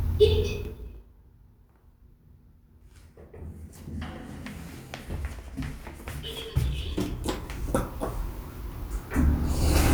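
Zipper noise runs from 0.51 to 1.11 s, while the level drops by about 25 dB. Instead of gliding down, the gain falls in unsmoothed jumps of 2 dB, roughly twenty of them a second. Each abrupt jump puts a tiny discontinuity in the waveform, so a fast ticking, zipping texture rides on top of the sound until the fade ends.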